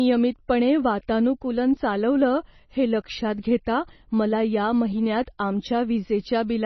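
Throughout, the speech has no content above 6 kHz and a watery, swirling texture with smeared attacks, likely MP3 compression at a very low bitrate, around 24 kbps, unlike plain low-pass filtering.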